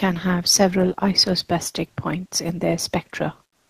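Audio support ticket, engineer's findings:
Comfort noise in place of the background, 3.49–3.70 s: real ambience becomes steady, featureless hiss, level shifted about 7 dB; likely Opus DTX. Unlike a noise gate, the gap is filled, not silent.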